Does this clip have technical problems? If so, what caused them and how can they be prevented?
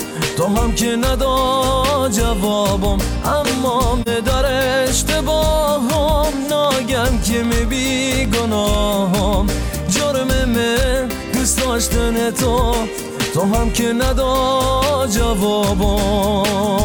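Yes. At 4.02 to 4.08 s there is AAC frame loss with muting: one frame, about 43 ms, was lost and its spectrum zeroed, so the overlapping windows fade the sound out and back in. Unlike a hard dropout, the hole has soft edges. Sending the stream over a more reliable transport with error protection would prevent it.

From 6.64 to 8.74 s come periodic USB or driver dropouts: every 0.1 s a tiny slice of audio, well under a millisecond, is replaced by silence, giving about twenty gaps, heard as regular ticks while there is signal. Their strict regularity and hard edges separate them from the single, smoothly faded frame loss. Stopping the blocking background task or updating the driver would prevent them.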